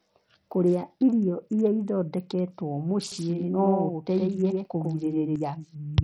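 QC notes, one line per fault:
Throughout: Bluetooth SBC compression, heavy. Treble thins and flickers in and out, with a gritty, aliased grain riding on the speech. This points to a starved bit pool, likely at about 64 kbps, leaving the top sub-bands with almost no bits and the rest coarsely quantised.
3.12 to 5.36 s: doubled audio track. A second full-band copy of the speech trails about a tenth of a second behind, roughly 5 dB down, with no room tail. It switches on and off abruptly, likely a slower second capture path mixed in.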